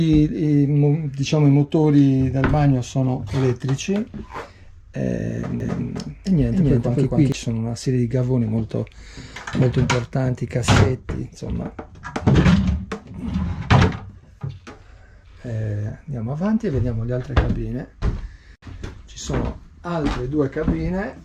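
From 5.60 s to 7.32 s a doubled audio track appears: a second, full-band copy of the sound trails the original by around 300 ms at roughly equal level, with no decay or room colour, starting and stopping abruptly. The likely cause is the signal being captured twice through a slower path.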